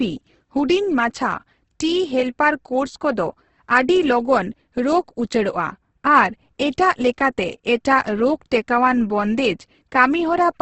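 Speech that sounds grainy and rough from start to finish, with nothing above 8.2 kHz, which points to heavy Opus compression at a very low rate, likely its music mode at around 12 kbps. Band energies are kept, but with too few bits the fine detail is filled by folded or noise content. That is why it sounds grainy rather than swirling: unlike MP3, there are few watery spectral holes, just roughness over a narrowed top end.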